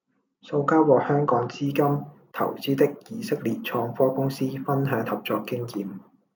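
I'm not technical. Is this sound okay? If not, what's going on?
No. From about 1.67 s, just after "香港資", to the end, there is imaging from sample-and-hold upsampling. The speech was stretched to a higher rate by repeating each sample without smoothing, which fits a 16 kHz original. The result is a thin metallic fizz above 8 kHz that rises and falls with the speech.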